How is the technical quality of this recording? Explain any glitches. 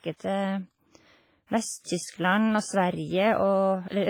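Technical quality is poor: heavy coding damage runs through the whole recording.

WMA compression, throughout: this is likely a Windows Media Audio transform encoding at a low bitrate, consistent with roughly 24 kbps. Long transform blocks smear quantisation noise around each syllable and weak spectral detail is discarded, so the speech sounds washy and ringing, with hiss that pumps along with the voice.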